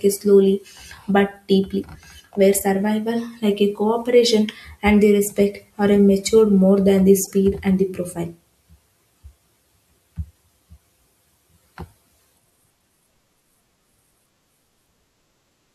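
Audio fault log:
7.25 to 7.32 s, corrupt frame decoded: a short squeaky burst of noise, fairly prominent at around -25 dBFS, lasting about 70 ms. Its length suggests roughly three damaged codec frames. Flipped bits in those frames were decoded anyway, so misread gains and codes put energy at the wrong frequencies.
12.08 s, corrupt frame decoded: a tiny, very faint blip near -50 dBFS, from the same kind of bit damage inside a compressed frame.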